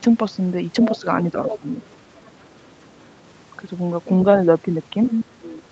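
Other side's voice leaking through, at 0.79 to 0.98 s: a second voice sits about 10 dB under the talker's speech. This is likely loudspeaker echo that the canceller left in the microphone signal. Speech suppressed in double talk follows from 1.01 to 1.85 s. The talker's level sags by around 10 dB in pieces totalling roughly 400 ms, likely because the canceller could not tell its own talker from the returning echo while both sides spoke, so it turned both down. The leak returns, overlapping that stretch, from 1.45 to 2.43 s, again about 10 dB below the speech. At 2.81 to 3.09 s it is barely there, some 40 dB down. At 5.07 to 5.25 s it comes back almost as loud as the talker, only about 5 dB under. A second suppression runs from 5.38 to 5.65 s, with the talker's voice pulled down by up to about 20 dB across roughly 300 ms, likely while the other side talks over it. Throughout, the audio stops at 8 kHz, which fits an Opus call link at about 32 kbps.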